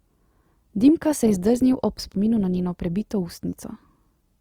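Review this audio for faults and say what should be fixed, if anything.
Throughout, the speech sounds grainy and rough. That is likely Opus compression in music mode at about 24 kbps, filling starved bands with folded or noise content. To prevent it, encode at a higher Opus bitrate.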